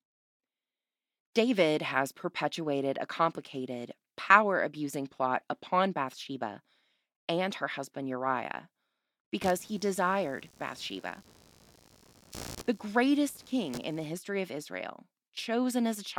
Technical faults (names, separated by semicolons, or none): computer activity noise